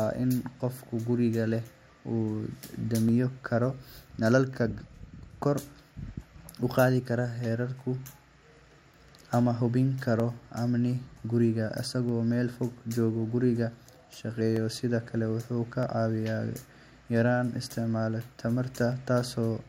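Dropped samples in this speech at 3.09, 7.45, 10.20, 12.09 (just before "meel fog"), 14.56, 15.83 and 18.92 s give sharp clicks, likely from well under a millisecond of missing waveform.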